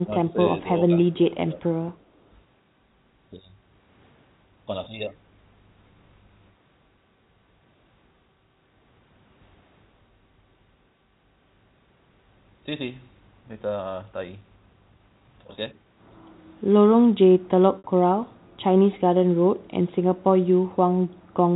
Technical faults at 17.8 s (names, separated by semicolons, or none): packet loss with pitch repetition